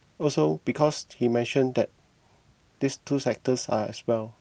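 At 0.85 to 0.91 s the speech turns briefly rough and noisy for about 40 ms, which fits two lost packets rebuilt from error correction. The decoder filled the gap with the lower-bitrate copies carried in the following packets, so nothing drops out, but detail thins and grain rises. A shorter repeat of the same lost packet rebuilt from error correction occurs at 3.49 to 3.51 s, about 20 ms, consistent with a single packet.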